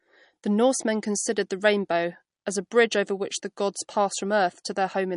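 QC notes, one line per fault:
Throughout, MP3 compression: treble stops at about 10.6 kHz, and speech sounds watery with smeared consonants, pointing to a low bitrate around 40 kbps, likely from lossy encoding.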